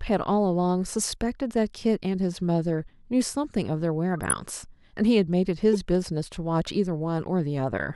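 At 4.14 s a corrupt frame decoded breaks into the speech: for roughly 0.19 s, across several damaged frames, flipped bits lead the decoder to misread gains and codes, so energy lands at wrong frequencies and the passage turns into a squeaky, noisy burst peaking around -15 dBFS. A shorter blip follows at 5.73 s, lasting about 24 ms. Unlike a dropout or concealment, wrong sound is actively played.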